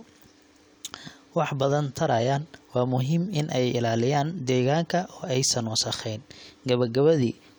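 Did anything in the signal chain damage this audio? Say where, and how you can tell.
No, nothing along the chain from capture to playback leaves an audible mark on this speech recording.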